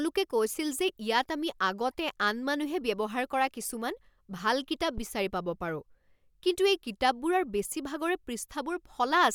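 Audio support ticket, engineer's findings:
Deep, short thump in the speech, 4.98 to 5.05 s, peak about -24 dBFS, dying away within about 17 ms. Phantom power thump. Probable component: input coupling capacitors on the mic channel. Mechanism: phantom supply switched on or off while the input was live, the DC step passing through the capacitors as a low-frequency transient.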